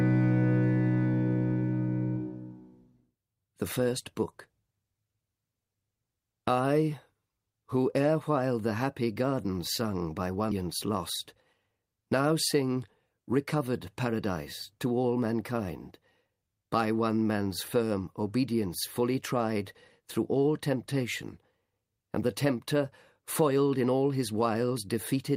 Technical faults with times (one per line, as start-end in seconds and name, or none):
10.51 skip ahead
12.54-14.24 jitter buffer speed-up